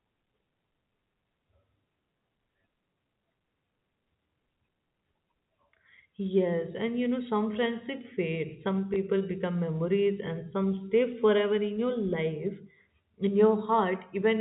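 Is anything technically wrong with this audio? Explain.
Yes, there is one fault. Packet loss with last packet repeated occurs at 8.94 to 8.96 s. Part of the stream went missing, and the receiver filled the 20 ms gap by replaying the audio it had just played. That length fits a single lost 20 ms packet. The single replayed block comes through as a small blip in the speech. The speech is carried over G.711 telephone coding, so nothing above 4 kHz is present.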